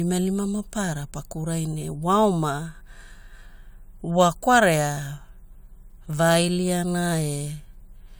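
Speech clip with no faults.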